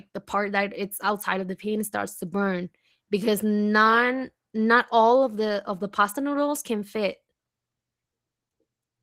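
Speech, with Opus voice compression audible throughout: the voice sounds hoarse and slightly robotic, which fits a hybrid-mode stream near 16 kbps. On a spectrogram, content above 8 kHz would look coarse and patchy, with smeared texture stepping in 20 ms frames.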